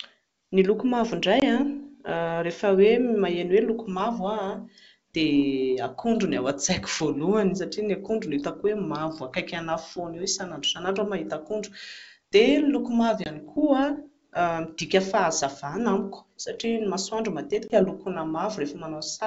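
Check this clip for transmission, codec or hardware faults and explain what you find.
Three brief dropouts from packet loss on an ADPCM call, at 1.40 to 1.43 s, 13.24 to 13.29 s and 17.68 to 17.79 s. Each drops about 20 ms, roughly one packet, filled with silence. The decoder's adaptive predictor and step size drift from the sender's, so each hard-edged gap is followed by a short stretch of slightly distorted speech before it settles. The G.722 wideband coding itself sounds clean, in keeping with the full 64 kbit/s mode.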